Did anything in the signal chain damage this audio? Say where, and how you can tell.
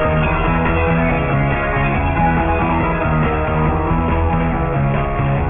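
Yes. A sample-rate conversion stage damaged the audio with aliasing from start to finish. Content was decimated without an anti-alias filter, and the band ends abruptly at 3 kHz, which fits a drop from 48 kHz to 6 kHz. Energy that belonged above 3 kHz has been mirrored back down beneath it as inharmonic, unrelated tones, sitting not far below the wanted signal, around 10 dB down. High-frequency detail therefore sounds gritty and metallic.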